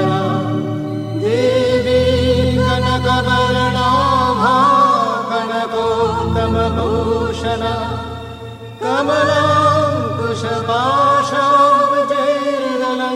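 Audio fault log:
0.1–13.14 s, clock slip clicks: a fine, regular rattle of single-sample slips, one roughly every 30 ms, several hundred in all, heard as a soft buzz-like ticking over the sound. It is likely caused by two devices running on unsynchronised clocks that differ by around 0.1 percent, so the accumulated offset reaches a full sample about thirty times a second and a sample is dropped or repeated each time.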